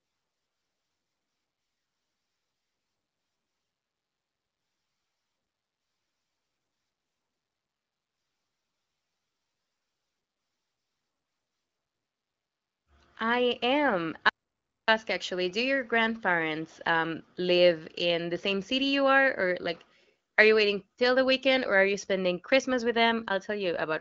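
At 14.29 s the input feed to the recorder was cut off, likely from a lost connection or momentary mute, while writing carried on with silence until 14.88 s. The result is an audio dropout to silence of about 0.59 s: the speech stops dead after "I am" and resumes abruptly at "actually do your grandparents", with the gap completely empty and even the background room tone gone, so whatever was said there is lost. The band-limited HD Voice character of the AMR-WB coding continues on either side of the gap.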